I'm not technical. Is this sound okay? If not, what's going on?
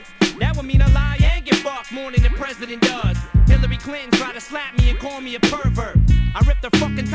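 Yes, nothing is wrong with this sound.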